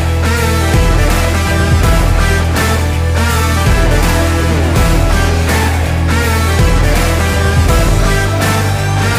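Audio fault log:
No fault is logged for this audio.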